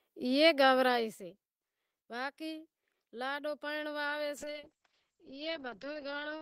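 At 4.38 s, right after "لاڈو پرنڑوا", a call bitrate drop takes the encoder from 32 to 8 kbps for the rest of the clip, lowest for 1.87 s. The speech turns rough and muffled, and a spectrogram shows everything above 8 kHz abruptly cut away.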